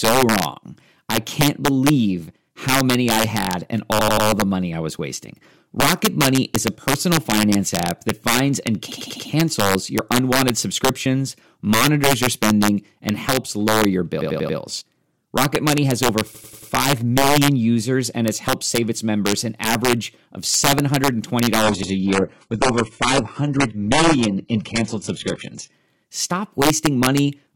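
Integer overflow runs throughout: loud speech peaks pushed about 6 dB past full scale wrap to the opposite sign, producing violent cracks sharper than clipping on a small fraction of samples.

Repeated buffers at 3.99–4.27 s, 8.92–9.29 s, 14.21–14.58 s and 16.35–16.72 s: when audio arrives late, a roughly 93 ms chunk (fitting a 4096-sample buffer) replays three or four extra times, giving hard-edged stutters.

An adaptive stream at a lower bitrate runs from 21.63 to 25.72 s. Nothing remains above 11.1 kHz, and codec artefacts rise, consistent with a switch from 96 kbit/s AAC-LC to 12 kbit/s HE-AAC.

Another repeated buffer falls inside that stretch, at 21.83–21.92 s, where one 93 ms chunk plays once more.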